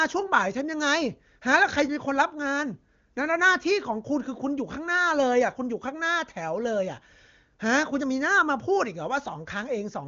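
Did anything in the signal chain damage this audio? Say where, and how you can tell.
No fault in the chain.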